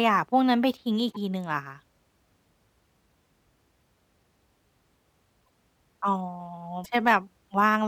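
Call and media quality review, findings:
Speech jumps ahead, garbled blip at 1.11–1.17, 5.45–5.50 and 6.83–6.86 s. Likely broken MP3 bit reservoir. Lost frames; following 26.1 ms frames read wrong bytes.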